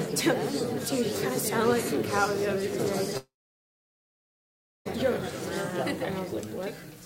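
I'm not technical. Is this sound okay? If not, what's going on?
No. The most likely cause is a long network dropout: the connection stopped delivering audio for about 1.7 seconds, from 3.17 s to 4.87 s. The receiving end tried to cover the gap by stretching out the last bit of sound it had, which fades away quickly, and then leaves near-silence for roughly 1.6 seconds. When the sound returns at 4.87 s, it simply carries on from there, so whatever happened during that gap is gone for good.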